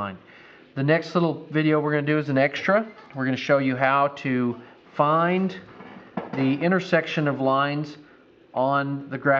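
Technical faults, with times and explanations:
No technical faults can be heard anywhere in this clip. There is nothing here that needs a time or an explanation.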